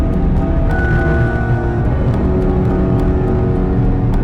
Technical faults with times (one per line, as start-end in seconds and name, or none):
0.00-4.23 hard clipping